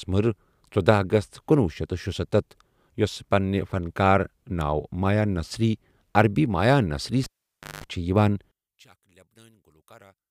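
At 7.24 s, right after "نصری عربی مایا نصری", a cable is pulled and plugged in: a pop, about 0.55 s of near silence, then roughly 0.19 s of 50 Hz mains buzz while only the tip touches, and a second pop at 7.84 s. The buzz and paired pops set it apart from a plain dropout.

From 8.51 s to the end, the speech falls by about 32 dB, leaving only a faint copy. The likely cause is one channel inverted, cancelling the centred speech in a mono sum. A simple gain drop would leave a quieter but full copy.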